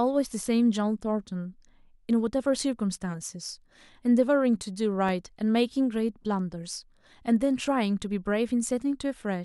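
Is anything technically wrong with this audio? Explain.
Yes. From 4.63 to 5.77 s the speech carries CD scratch ticks: six regular clicks, the longest lasting about two milliseconds. A disc blemish overwhelmed error correction on each turn, so the player patched those samples. A spectrogram shows thin vertical lines about five per second, and the waveform shows tiny notches.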